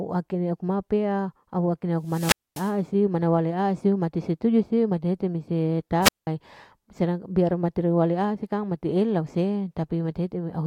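Wireless microphone squelch dropouts occur from 2.03 to 2.76 s, muting for about 244 ms, and from 6.01 to 6.27 s, muting for about 188 ms. The radio link fades, static swells, then the receiver's squelch cuts to near silence. The hiss before each hole distinguishes it from a clean digital gap.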